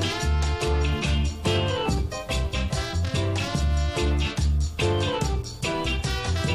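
No technical faults occur at any point, so there is nothing to describe in time order.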